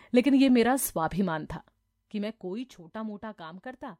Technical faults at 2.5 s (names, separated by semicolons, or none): zipper noise